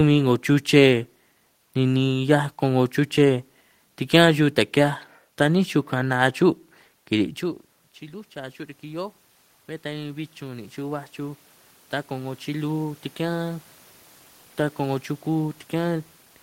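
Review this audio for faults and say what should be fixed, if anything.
Automatic gain rising, 9.82 to 11.48 s: after the input fell about 18 dB, gain crept up about 4 dB, lifting speech and room noise into a rising waveform envelope. Fixing the gain at a suitable level, or slowing the gain control's response, would prevent this swell.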